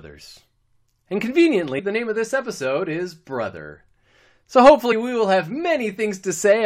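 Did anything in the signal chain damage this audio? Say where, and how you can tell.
Yes, compressed frames were skipped at the codec stage. At 1.78–1.80 s, just before "the name of this", about four 23.2 ms frames, roughly 100 ms of speech, are missing. At 4.91–4.93 s, before "we will have", about two frames, around 50 ms, are gone. Each join sounds like a soft smeared blip rather than a click. On a spectrogram, the harmonic traces jump abruptly to new positions with no gap, and the waveform shows an envelope discontinuity.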